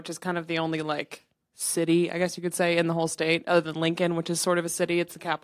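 No technical faults are audible.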